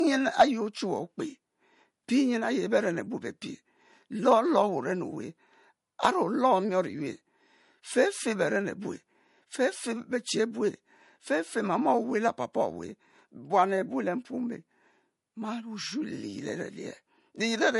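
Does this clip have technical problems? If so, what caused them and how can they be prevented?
Yes. Throughout the speech, nothing reaches above 11.2 kHz, and the smeared, swirly coding artefacts of a heavily compressed MP3 stay audible even though the file is large. This is likely low-bitrate audio saved at a high bitrate: an encode around 48 kbit/s later re-saved near 320 kbit/s, which cannot restore what was discarded. A simple low-pass filter would leave a clean band edge without those artefacts. Prevent it by re-encoding only from the original uncompressed source.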